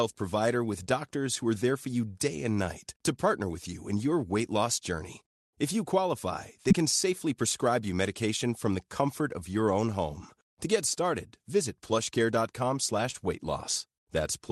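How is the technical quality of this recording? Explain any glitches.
The recording has two audible faults over a call-style speech path, with content cut off above about 12 kHz, consistent with an Opus link near 32 kbps.

From 0 to 2.66 s there is video or display buzz. A screen or video cable couples into the audio, giving a 50 Hz field-rate buzz with hash above it, about 40 dB below the speech. On a spectrogram this appears as a steady 50 Hz line with its harmonics.

At 6.69–6.79 s and 13.11–13.16 s there is short concealed packet loss. Around 20 ms of audio never arrived, and the receiver extrapolated the previous sound to fill the gap. Each one is heard as a brief smear or wobble.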